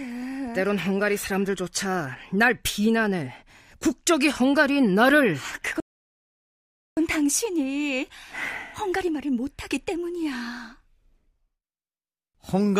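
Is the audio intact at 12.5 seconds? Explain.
Yes, the speech at 12.5 seconds is intact, with no audible fault at that moment.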